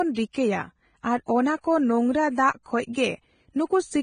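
A speech recording carries heavy, constant codec damage throughout: the top end is hissy and grainy, consonants and vowel tones sound roughened, and nothing remains above about 9.7 kHz. This is likely Vorbis compression at a low quality setting. Its coarse quantisation turns fine high-frequency detail into noise of similar energy, a degree of damage consistent with a bitrate around 22 kbps. On a spectrogram the treble stops at a flat horizontal ceiling near 9.7 kHz, and the region below it looks speckled and smeared. Harmonics lose their clean lines. At 0.32 to 0.35 s there is pre-echo: a short hiss of about 28 ms rises just ahead of a sharp onset, and the attack itself sounds softened. The codec spread its quantisation noise across the whole transform block, so noise meant to hide under the loud attack leaked into the quiet moment before it. The waveform shows a low fuzzy smear before the transient, and the spectrogram shows a brief broadband haze preceding the onset's vertical edge.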